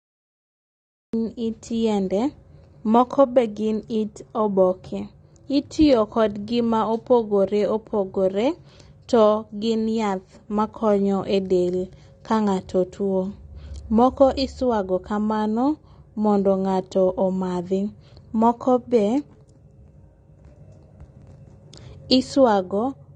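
Cut-off start, 0 to 1.13 s: the clip opens on digital silence, and at 1.13 s the speech appears abruptly in the middle of a sound rather than rising from its natural attack. Whatever came before that point was never captured, so the recording or stream began late. The onset arrives with no fade-in, and the first syllable is heard already under way.

AAC compression, throughout: the speech is dull and smeared, and nothing is present above about 9.6 kHz. This is most likely lossy AAC-LC coding at a low bitrate, around 32 kbps. At that rate the encoder lowers its cut-off and quantises the remaining spectrum coarsely, so the damage is plainly audible. Sibilants lose their crisp top and take on a fizzy, watery texture, and sustained sounds warble.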